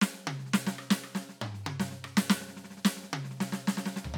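No faults in this music.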